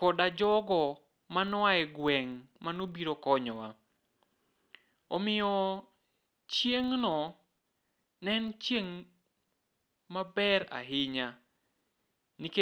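Throughout the speech, a filter restarted on every block. It drops its state at each block boundary and begins again from silence. Each restart leaves a small tick. The ticks repeat at 25 Hz, so blocks are 40 ms long. They merge into a low buzz that rises and falls with the speech level.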